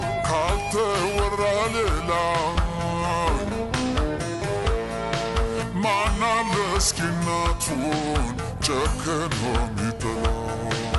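Throughout, a wrong sample rate slows the audio to 0.726 speed and drops pitch about 5.6 semitones together, fitting 44.1 kHz material played at 32 kHz, unlike separate pitch-shifting.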